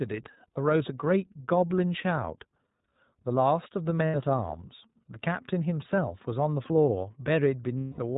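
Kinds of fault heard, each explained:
iLBC codec: Throughout the clip, a narrowband voice codec removes everything above 4 kHz and codes each short frame independently, leaving the speech clear but plainly rough and synthetic. The sound fits iLBC's 15.2 kbps mode with 20 ms frames.
Lost iLBC frames: At 4.06 to 4.16 s (80 ms) and 7.78 to 8.00 s (200 ms), missing packets were concealed by repeating the last pitch cycle mixed with noise. Each gap sounds like a held, buzzy vowel, and the voice recovers almost at once.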